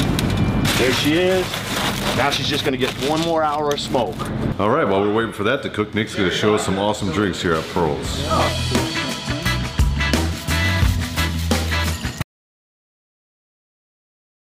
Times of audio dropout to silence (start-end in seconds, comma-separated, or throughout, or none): 12.22-14.52